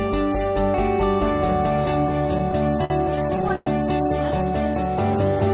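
Repeated stalls (stutter) run from 2.38 to 3.68 s: twelve times the packets arrived late and the jitter buffer emptied, so the receiver stretched the last sound to bridge each wait, about 290 ms in total (roughly a fifth of that span), the longest 109 ms. Nothing drops out, but the sound drags and stammers. Throughout, the call path cuts off everything above 4 kHz, which points to a narrowband codec such as G.711.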